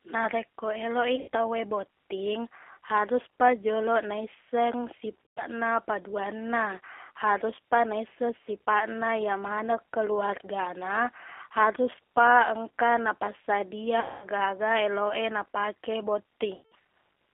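Throughout, the speech sounds narrow, slightly rough and synthetic, with nothing above about 3.4 kHz. The G.729 codec at 8 kbit/s rebuilds it from a vocal filter, a pitch predictor and sparse pulses.

At 1.16 s after "eloq i", at 5.25 s after "botting haruspa joloq naisseng", at 14.0 s after "haruspa engka napassadia", and at 16.54 s, the sound smears into a fading buzzy tone or coloured noise. This is VoIP packet loss concealed by the speech codec, which extrapolates across 120 to 220 ms of lost audio.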